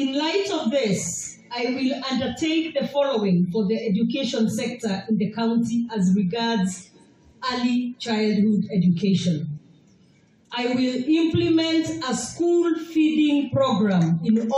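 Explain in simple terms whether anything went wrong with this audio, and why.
Nothing went wrong here, so there's nothing to point to and nothing that needs fixing.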